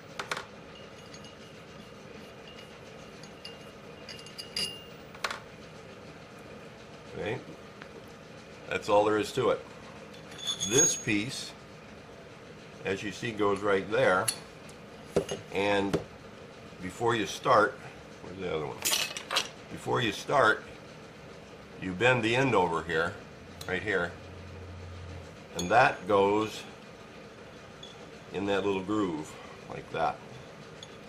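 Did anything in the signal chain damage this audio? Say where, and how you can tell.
Yes. A single loud pop sits at 7.82 to 7.84 s, peaking roughly 10 dB above the surrounding sound, which continues unbroken beneath it. The likely source is the analogue wiring stage, with a voltage step from a plug, switch or static discharge entering the signal. On the waveform it appears as one tall, narrow spike that stands well clear of the envelope. On a spectrogram it shows as a thin vertical stripe spanning the whole frequency range.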